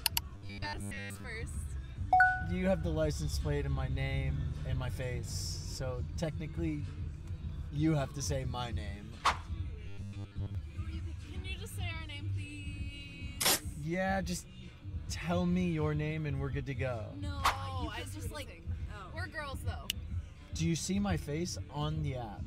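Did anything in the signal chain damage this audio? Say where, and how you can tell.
Yes. Robotic sound from repeated short buffers occurs at 0.35–1.25 s and 9.88–10.55 s, where a rigid 100 Hz buzz is heard. That fits a 10 ms buffer replayed over and over at the driver or buffer stage, likely because audio arrived too seldom, so most of the real signal was skipped.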